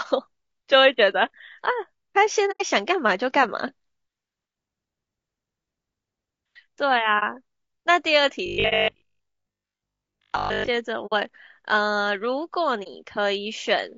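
Throughout the speech, a rough, grainy quality sits on every syllable, most likely from low-delay AAC compression (AAC-ELD) at a low rate near 32 kbps. Its short transform frames resolve voice harmonics poorly, so noise fills the gaps between them and the upper band sounds thin and synthetic. On a spectrogram the harmonic stripes look smeared, with hazy energy between them and a patchy, flattened top band.

AAC frame loss with muting first appears from 2.51 to 2.62 s, a soft-edged hole of about 90 ms, which fits three lost frames. The decoder zeroed the missing spectrum, and the overlapping windows fade the sound out and back in. In the waveform this shows as a tapered gap, and on a spectrogram as a clean vertical blank. A shorter 30 ms dropout of the same kind follows at 7.19 to 7.23 s.

From 8.46 to 10.7 s the sound turns into a rigid, metallic 50 Hz buzz that still loosely tracks the speech. 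This is robotic sound from repeated short buffers. Likely, new audio arrived too seldom, and the gap was filled by replaying the last 20 ms or so while most of the real audio was skipped. A spectrogram shows evenly spaced 50 Hz comb lines, and the waveform shows identical repeating cycles. Inside this stretch, another 30 ms muted frame loss falls at 8.69 to 8.73 s.

Further muted frame losses follow at 11.06 to 11.13 s, about 60 ms, and at 12.83 to 12.88 s, about 30 ms.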